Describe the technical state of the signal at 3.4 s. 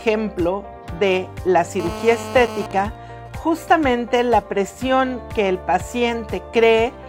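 At 3.4 s the signal carries GSM signalling bursts, running from 2.71 to 3.56 s. A nearby 2G phone, fitting a call with its user silent, radiates short radio bursts that the audio circuit rectifies. They are heard as even ticks with a longer 217 Hz buzz twice a second, about 20 dB below the signal. A spectrogram shows stacked 217 Hz harmonics in short groups, and the waveform shows clustered spikes.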